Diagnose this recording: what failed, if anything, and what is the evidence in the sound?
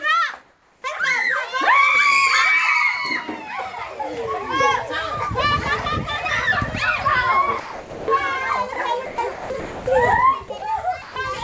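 Comfort noise in place of the background, 0.42 to 0.84 s, at the call-processing stage. For 420 ms the real background, which sits about 39 dB below the loudest parts, gives way to a steady, featureless hiss about 2 dB quieter, then the genuine background returns. The likely cause is discontinuous transmission: the sender's detector judged the moment silent and stopped sending, and the receiver synthesised shaped noise to fill the gap.

Sound dropped by the voice detector, at 7.60 to 8.08, 8.74 to 8.76, 9.06 to 9.18, 9.32 to 9.50, 9.60 to 9.86, 10.58 to 10.62 and 11.02 to 11.16 s, again at the call-processing stage. In each span actual sound vanishes under flat noise, the longest loss being about 370 ms near 7.6 s. The sender's detector likely mistook quiet sound for background and cut transmission until it retriggered. The call path itself carries nothing above 8 kHz, which fits the G.722 codec.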